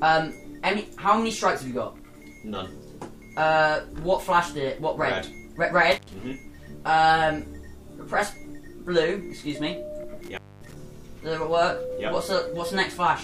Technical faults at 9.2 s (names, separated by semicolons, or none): none